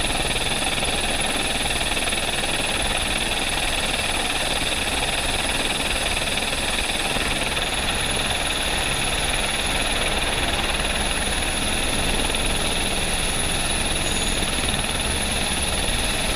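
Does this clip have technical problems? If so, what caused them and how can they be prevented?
Yes. At 7.88 s there is a brief buzzing click: a sliver of sound about 1.45 ms long plays five times in a row, each copy butting hard against the next. This is a repeated buffer. Fresh audio missed its deadline, so the playback device resent its last block four extra times. The block length fits a 64-sample buffer, and little or nothing seems to be lost. Using a larger buffer and keeping the audio thread free of competing work would prevent it.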